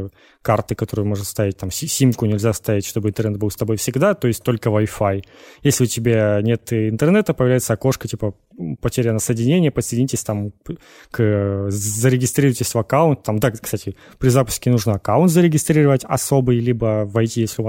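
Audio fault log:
No faults detected in this speech recording.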